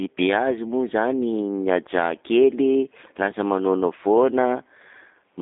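From start to finish the speech carries G.729 codec damage: rebuilt from a vocal tract filter, pitch predictor and sparse pulses, it sounds rough and synthetic, in a line band of about 250 Hz to 3.7 kHz. That buzzy texture, beyond mere band-limiting, fits an 8 kbit/s codec.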